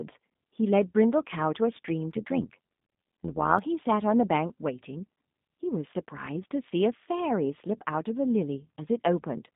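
G.729 codec damage runs through the whole clip. The speech has been rebuilt from a compact model of the vocal tract, a pitch predictor and a few pulses per frame, which fits an 8 kbit/s G.729 stream. The line band spans about 150 Hz to 3.7 kHz, and nothing above 4 kHz survives, so sibilants lose their edge. The codec damage is plainly audible as a rough, slightly synthetic texture on every phrase.

Overlap-add ripple appears from 2.11 to 3.60 s. The signal was split into windowed frames and rejoined with an overlap whose gains fail to add up evenly, so the level dips by about 11 dB once per frame, around a hundred times a second. That fast, regular pumping sits on top of the codec roughness as a metallic buzz before the sound steadies again.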